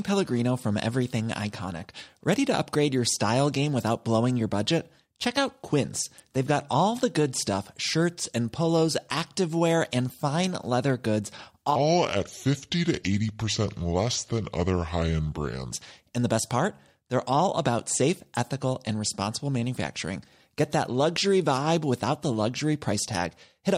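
From 11.76 to 15.72 s, a section at the wrong speed: the speech plays at 0.754 times its recorded rate, so it drags and drops about five semitones in pitch, sounding deep and slowed. The likely cause is playback against a mismatched clock.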